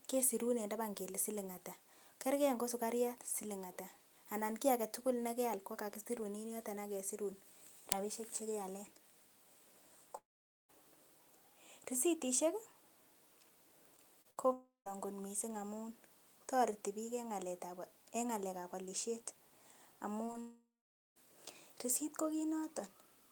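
From 10.17 to 10.71 s the speech breaks off for about half a second: a fading buzz continues the last sound, then roughly 0.47 s of silence, and the audio resumes further on with that stretch lost. This is a long network dropout, likely a run of packets that never arrived. Between 13.97 and 14.92 s there is repeated packet loss with a robotic sound. Four gaps, the longest 59 ms, are each patched by extending the preceding audio, which makes the sound choppy. Inside that span, from 14.53 to 14.88 s, a second long dropout loses about 0.34 s, leaving a brief fade and around 0.15 s of silence. At 20.26–20.30 s and 20.32–20.36 s come two short concealed packet losses, each about 20 ms missing. The receiver bridged them with synthesized continuation, heard as quick smears or wobbles. A third long dropout follows at 20.40–21.18 s, losing about 0.76 s, with the fill decaying into roughly half a second of silence.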